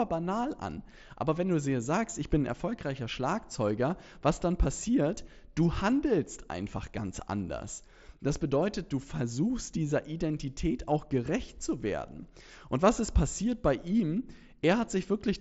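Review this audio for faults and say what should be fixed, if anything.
Nothing here needs fixing: the speech arrives over a Bluetooth mSBC headset codec link that is working as intended, with the expected wideband ceiling near 7.7 kHz and only the light codec grain that path normally carries.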